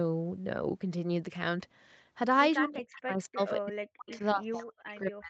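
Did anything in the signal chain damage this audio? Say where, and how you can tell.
Yes. The speech is pulled down hard from 2.64 to 3.4 s, with about 0.7 s affected in total, and again from 3.57 s to the end. At its deepest the level falls by about 40 dB, so parts of the speech nearly vanish. This is speech suppressed in double talk, at the call processing stage. The likely cause is an echo canceller that heard both sides at once and could not separate this talker from loudspeaker echo. It turned everything down to be safe.

Between 3.4 and 3.46 s a faint, short copy of the speech appears. It arrives 242 ms late and sits about 25 dB below the direct speech. This is echo leak, also at the call processing stage. The far end was likely playing the call on a loudspeaker, and its echo canceller did not remove all of what its microphone picked up, so a scrap of that sound was sent back.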